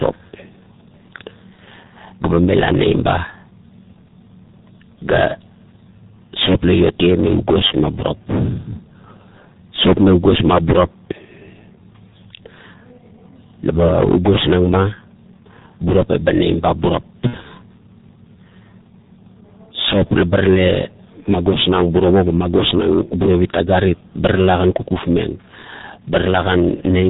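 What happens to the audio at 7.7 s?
From 7.67 to 7.74 s there is VoIP packet loss concealed by the speech codec. What sounds like a single lost 30 ms frame was filled by the decoder repeating its last pitch and filter at falling gain. It comes out as a brief, smeared stretch of sound that fades. On a spectrogram this shows as a short stretch of flat, repeated spectral shape, and on the waveform as a dip in level.

Throughout, including this moment, the G.723.1 codec at 6.3 kbit/s muffles and roughens the sound. Nothing above 4 kHz survives, so a spectrogram shows a hard ceiling there. Its slow model updates blur consonant onsets into a hoarse texture.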